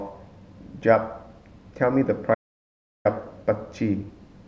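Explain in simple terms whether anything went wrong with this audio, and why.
From 2.35 to 3.05 s the speech cuts to dead silence, an audio dropout to silence, likely a lost input. No room tone remains, unlike a natural pause.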